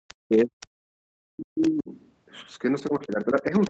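At 0.08 to 0.14 s a faint second voice sits under the speech, about 25 dB down: the other side's voice leaking through, likely because the echo canceller left some loudspeaker pickup in the microphone signal. From 0.26 to 0.76 s the talker's speech sinks and breaks up, dropping by up to about 40 dB over roughly 0.4 s in total. This is speech suppressed in double talk, likely from the canceller treating the overlap as echo and turning everything down. Inside that dip, at 0.61 to 0.66 s, another scrap of echo appears at about 35 dB down. The same pattern returns from 1.08 to 1.91 s, with about 0.7 s of the speech pulled down by up to about 40 dB. Leakage at 1.62 to 1.70 s is the strongest, at about 20 dB below the speech. A final suppression starts at 2.89 s and runs to the end with similar depth, and echo fragments at about 35 dB down surface at 3.10 to 3.16 s and 3.36 to 3.41 s. Throughout the clip, the call path's Opus coding limits the audio band to 8 kHz.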